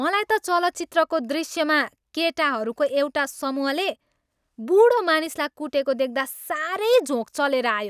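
No technical faults can be heard anywhere in the recording; the speech signal stays steady and intact throughout.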